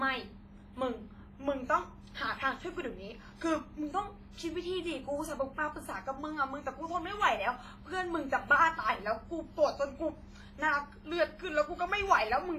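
Speech runs through heavy WMA compression from start to finish. It sounds ringing and washy, with hiss that swells and fades with the voice. Nothing is heard above 15.5 kHz. The damage fits a low bitrate, likely around 24 kbps.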